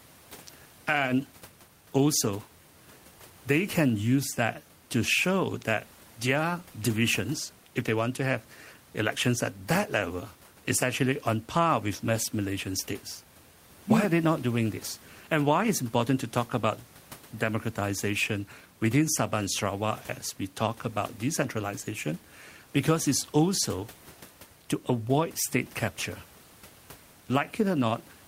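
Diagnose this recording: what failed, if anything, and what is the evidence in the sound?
Nothing in the chain seems to have failed here; the only thing underneath the speech is the ordinary background noise of the room, sitting about 25 dB below it, which is part of the recording itself rather than anything the system did.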